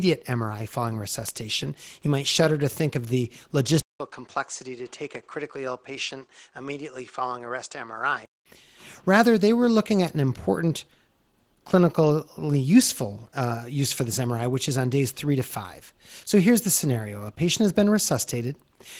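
Speech throughout carries Opus voice compression: a low-rate hybrid mode, SILK below 8 kHz with a CELT layer above, which fits roughly 16 kbps and leaves the voice plainly hoarse and slightly robotic. From 3.8 to 8.46 s, just after "to think of the", the input likely switched to a poorer device. A 200 ms silence marks the switch, and then the sound turns dull with nothing above 9.4 kHz, falls about 10 dB in level, and gains a faint new noise floor before clearing again.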